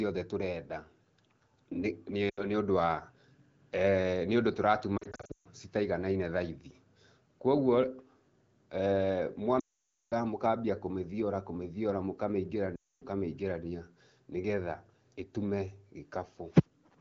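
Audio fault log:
2.29 to 2.42 s, 4.98 to 5.47 s, 9.59 to 10.13 s and 12.76 to 13.03 s, lost AMR speech frames: speech quickly drops to near silence, worst near 9.6 s, then returns briefly rough, as the decoder replays the last good pitch and vocal tract settings with falling gain.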